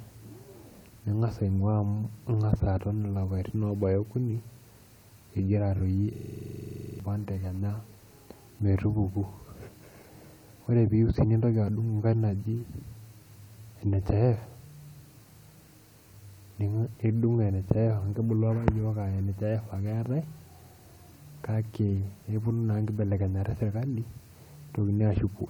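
At 6.14 s a system hang loop sets in: the machine stalls while the sound hardware keeps cycling one ring buffer. A 42.7 ms slice, fitting a 2048-sample buffer, repeats about 20 times at 23.4 Hz until 7.00 s, a buzzing stutter, and roughly a second of speech is lost.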